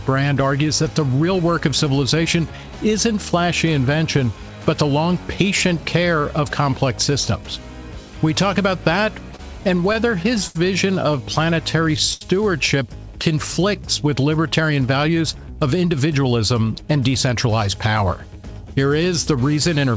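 Repeated stalls (stutter) run from 9.36 to 10.57 s. Packets kept arriving late, so the jitter buffer emptied four times and the receiver extended the last sound to cover 131 ms in total, the longest hold 71 ms. Nothing is lost, but the sound drags and stutters.

A short stall from a late packet follows at 12.13 to 12.23 s. One packet missed its slot, so the receiver held the preceding sound for 74 ms, then resumed where it left off. It is heard as a briefly frozen moment with a slight buzz or dip.

A jitter buffer speed-up spans 15.09 to 16.40 s. Having built up more queued audio than it wanted, the receiver cut roughly 150 ms by removing small pitch-period slices, so the sound plays at 109% speed with unchanged pitch and feels hurried. All of this is heard through G.722 coding, with nothing above 8 kHz.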